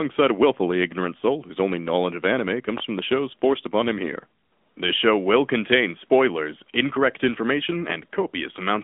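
From start to finish, the speech carries the sound of the AMR narrowband mobile codec. The audio is confined to a phone line band of 200 Hz to 3.5 kHz, so it sounds thin and boxed in. The codec rebuilds each 20 ms frame from a vocal-tract model fed by a few pulses. The damage is plainly audible. Voiced sounds take on a buzzy, synthetic edge, which fits a mid-rate mode near 10 kbps.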